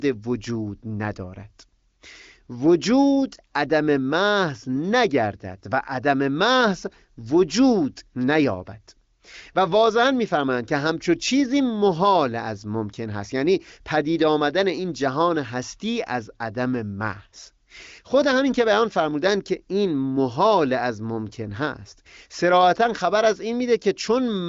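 No faults to report: the speech sits on an AMR wideband (HD Voice) path, its spectrum stopping near 7.6 kHz, with coding that fits the codec's 23.05 kbit/s mode.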